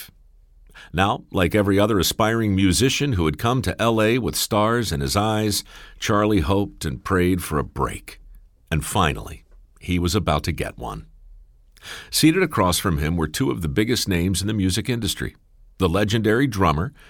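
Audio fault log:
No faults heard.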